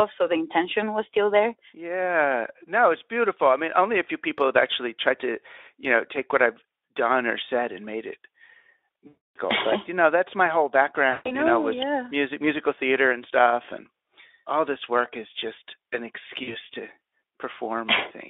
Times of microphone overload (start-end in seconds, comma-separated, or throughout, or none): none